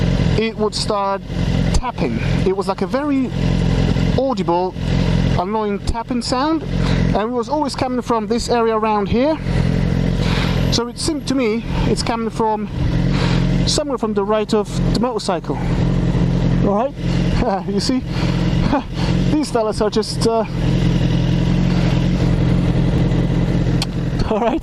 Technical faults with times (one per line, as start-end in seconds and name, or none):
10.99 overlap between stream segments
22.98 overlap between stream segments